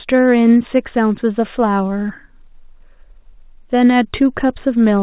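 Speech carried over what sounds like a normally working narrowband call path, with nothing present above 4 kHz, which fits G.711 mu-law at 64 kbps, and no technical faults to report.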